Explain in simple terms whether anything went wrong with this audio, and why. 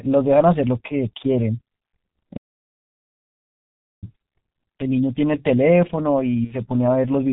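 G.723.1 codec, throughout the whole clip: the speech went through an early internet-phone codec that keeps only a rough, slowly updated model of the voice and drops everything above 4 kHz. The damage is heavy, so the voice sounds muffled and hoarse, with smeared consonants.

Playback stall, from 2.37 to 4.04 s: the sound stops mid-flow and stays silent for about 1.7 seconds before carrying on. The likely cause is that the player ran short of data, or was held up internally, and had nothing to output until it caught up.

VoIP packet loss concealed by the speech codec, from 6.44 to 6.55 s: about 60 ms of speech never arrived. The decoder filled the gap by stretching its last bit of voice into a fading sound, and the speech stays weak or distorted for a moment after the data returns.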